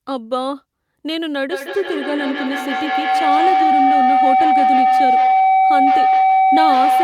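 Feedback howl starts at 1.51 s and runs to the end of the clip. Two devices sharing the room appear to be on the same call, so sound leaving one loudspeaker re-enters a microphone and returns louder each pass. Instead of dying away, the repeats grow and collapse onto the frequency the loop favours, here a tone around 700 Hz, pulsing roughly every 150 ms and peaking about 7 dB above the speech.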